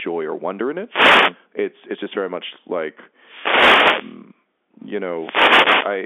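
At 0.87 to 1.36 s, 3.17 to 4.25 s and 5.12 to 6.00 s, the radio link fades as reflections cancel, causing wireless microphone noise hits heard as swishes of receiver static over the speech. Inside the middle one, at 3.59 to 3.68 s, bit errors on the digital phone line, roughly a fraction of a percent, corrupt single samples on the narrowband G.711 path.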